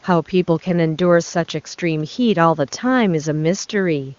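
No faults are audible in the speech; the passband stops near 7.2 kHz, as expected of the AMR wideband (HD Voice) codec at one of its upper rates.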